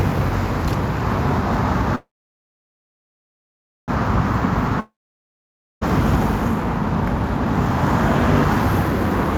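From 1.95 to 3.90 s there is a call audio freeze. Packets were likely held up in transit until the jitter buffer ran dry. The last sound trails off briefly, then about 1.8 s of silence follows. Playback resumes where it stopped, with nothing lost but now running about 1.9 s late.

At 4.80 to 5.83 s a long network dropout follows, likely from audio that never arrived at all. After a short fading tail, about 0.9 s of silence follows. The sound returns roughly 1 s further along, with that stretch gone.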